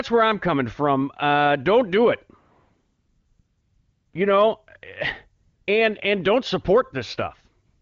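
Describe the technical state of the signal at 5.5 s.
At 5.5 s you're inside a stretch of AMR comfort noise running from about 5.43 to 5.67 s, roughly 240 ms. The phone's voice activity detector decided the talker had gone quiet and stopped sending speech frames, so the far end filled the gap with synthetic noise built from a rough sketch of the background's level and spectrum. What you hear is a smooth, even hiss that replaces the real room sound, switching in and back out at the edges.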